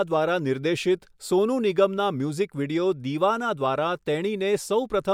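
Listening to the speech recording, nothing technical stood out as wrong.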